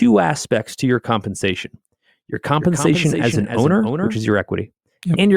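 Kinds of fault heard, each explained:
Doubled audio track: from 2.60 s to 4.16 s a full-band second copy trails the speech by roughly 300 ms at about 5 dB lower, dry and without decay, starting and stopping abruptly; the likely cause is a second capture through a slower path.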